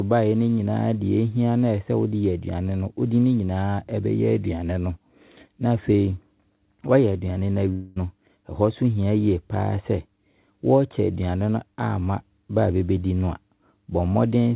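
From 7.72 to 7.98 s the speech smears into a fading, buzzy continuation of its last sound for about 240 ms, then picks up again with that stretch missing. The likely cause is a long network dropout, with the receiver stretching the last audio to cover packets that never arrived.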